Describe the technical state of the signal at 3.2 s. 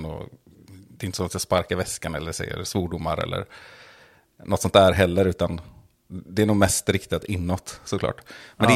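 At 3.21 s the stream likely lost a tiny run of samples, dropped samples amounting to a fraction of a millisecond. Because the missing stretch is so short, no sound is removed. Instead, the waveform leaps straight from one value to a later one, and that abrupt step in the speech is heard as a single sharp click. In a spectrogram it appears as a thin vertical line running through the spectrum at that instant.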